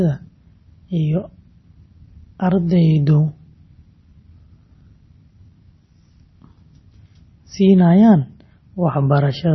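Speech run throughout through what is likely heavy MP3 compression, with the encoder starved of bits, which fits a rate near 24 kbps. Treble stops dead around 5.9 kHz, and weak frequency lines drop in and out between frames, leaving a watery, swirly texture and smeared consonant attacks.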